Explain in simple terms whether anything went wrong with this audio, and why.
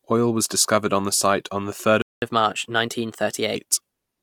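At 2.02 s the speech suddenly cuts to silence for about 200 ms, then resumes at 2.22 s. This is a playback stall: the player most likely ran short of audio data, or was briefly held up, so it had nothing to output until it recovered.

From 2.22 s to about 3.56 s the speech runs 1.15 times faster and sounds higher, by about two semitones, before settling back to normal. This is catch-up at higher speed: the player rushes through the delayed audio to make up the lost time.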